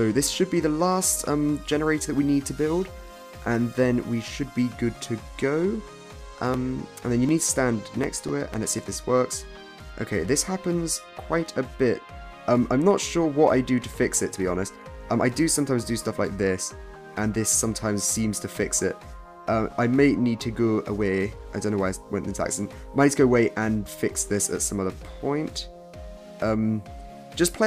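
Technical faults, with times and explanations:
6.54 to 9.28 s, periodic USB or driver dropouts. Every 0.25 s, roughly a millisecond of audio is skipped outright. A background task briefly stalls the bus or driver. Each skip butts the waveform together abruptly, giving about ten evenly spaced ticks that sound only while there is signal.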